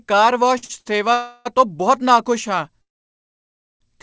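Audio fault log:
0.58 to 0.64 s, 0.64 to 0.71 s and 0.79 to 0.87 s, short stall from a late packet: three quick hiccups close together. Each time a packet turned up late, so the receiver held the last bit of sound for 45 ms, 50 ms and then 61 ms until it arrived. That gives a brief smeared, slightly buzzy sustain instead of a clean gap. Nothing actually drops out. The speech just gets pushed back a touch each time.
1.13 to 1.47 s and 2.81 to 3.82 s, call audio freeze: two longer holds, likely from packets getting stuck in transit and the jitter buffer running dry. The first lasts about 0.34 s and is a fading buzzy stretch that never goes fully quiet, right before "ਤੋਂ ਬਹੁਤ ਨਾਖੁਸ਼ ਹਾਂ". The second comes right after that phrase and runs about a second. It's mostly dead silence, with 960 ms of nothing once the brief tail fades. The speech picks up where it left off, so nothing's lost, but there's a real pause. 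The G.722 path underneath keeps everything below 8 kHz.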